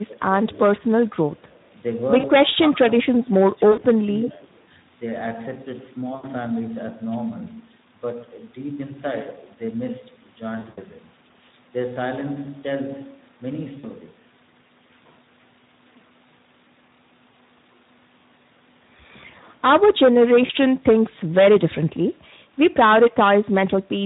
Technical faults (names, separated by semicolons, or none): Speex codec; VoIP packet loss concealed by the speech codec